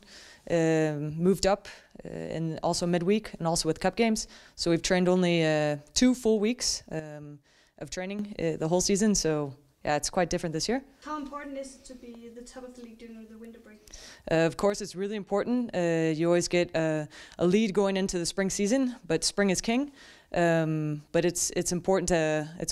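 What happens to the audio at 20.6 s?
At 20.6 s the audio plays through intact, with no fault at that moment.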